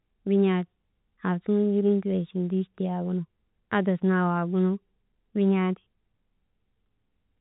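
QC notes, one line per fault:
No faults found in this speech clip. The G.711 telephone coding path is audible as a narrow telephone band, with nothing above about 3.8 kHz.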